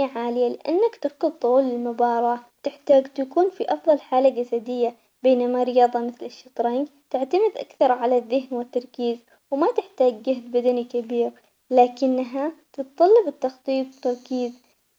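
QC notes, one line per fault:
10.69 s, electrical switching spike: a single sharp snap, about a millisecond long, sits on top of the speech right after "والتركيز وما تحتاج جهد" and before "كبير لكنها تتطلب التخطيط". It peaks at roughly -25 dBFS. The instant, broadband click points to a nearby switch, relay or static discharge likely arcing once and inducing a brief voltage spike into the audio line, which adds to the signal.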